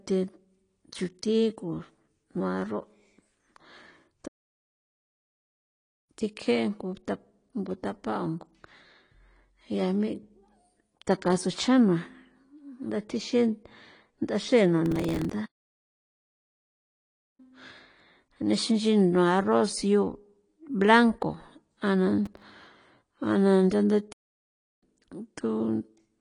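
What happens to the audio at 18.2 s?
At 18.2 s the speech carries the same damage heard across the whole recording, most likely from AAC compression: nothing survives above about 9.9 kHz, and the sibilants turn fizzy and warbling, which fits AAC-LC at a low bitrate near 32 kbps. The coder discards and coarsely quantises spectral detail to fit its budget. A plain low-pass filter would only dull the top. This smeared, shifting texture on held sounds comes from the codec.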